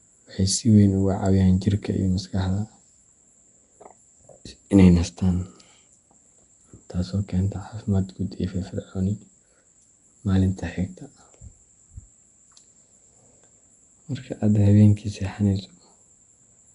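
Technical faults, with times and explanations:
Throughout, Nellymoser compression: the audio was likely passed through the Nellymoser Asao codec, which codes short blocks with a fixed, small budget of bits and fills weak bands with synthetic noise instead of the real signal, at a rate that fits roughly 44 kbps. The speech carries a plainly audible rough, hissy halo and a smeared, underwater quality, and nothing is present above about 10.6 kHz.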